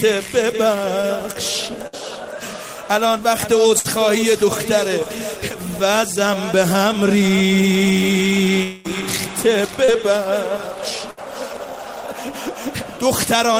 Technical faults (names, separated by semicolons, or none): short concealed packet loss; burst of packet loss; long network dropout